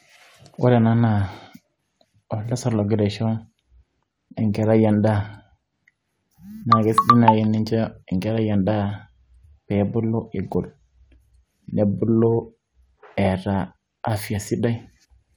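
No technical faults can be heard anywhere in this recording.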